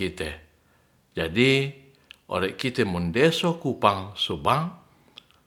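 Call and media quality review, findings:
Nothing to flag on this speech recording; no faults turned up anywhere in it.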